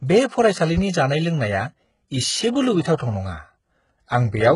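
HE-AAC compression, heavy throughout: the speech has nothing above 11.1 kHz, and the treble above the coded band is likely rebuilt from copied lower bands, which fits a bitrate around 12 kbps.

Loud pop, 0.78 to 0.80 s: a single sharp pop, a few decibels above the speech, sits on top of it; the likely cause is a sudden voltage pulse reaching the signal.

Pre-echo, 2.97 to 3.00 s: a hiss about 24 ms long comes before an attack, because the codec's quantisation noise was spread over the quiet moment preceding it.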